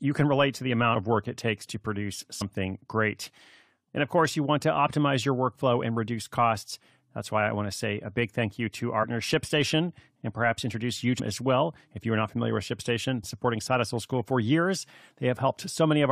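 Speech clip with compressed frames skipped: short jumps ahead at 0.94 s (after "can relate to the"), 2.40, 9.02, 11.18 and 13.22 s. The gaps grow from about 50 ms to around 200 ms, consistent with whole 23.2 ms frames missing or rejected by the decoder.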